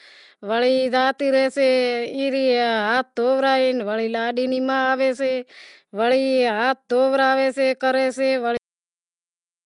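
Speech with a rough, hissy halo and a smeared, underwater feel throughout, with nothing above about 10.6 kHz, so it's likely Nellymoser compression, consistent with roughly 44 kbps. Then there's a cut-off end: at 8.57 s the audio stops mid-sound and drops straight to digital silence with no decay, because the final buffers were never written or played.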